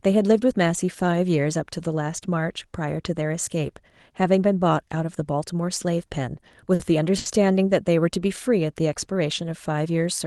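At 6.48 to 6.53 s, 6.75 to 6.82 s and 7.18 to 7.28 s, the speech has a short stall from a late packet. Each time, the jitter buffer ran dry and the receiver held the last sound until data arrived. The holds last 30, 50 and 80 ms. Nothing is lost, but the speech drags, with a slight buzz or dip. Each stall adds delay. The call codec's coding noise and top near 12 kHz fit Opus at about 24 kbps.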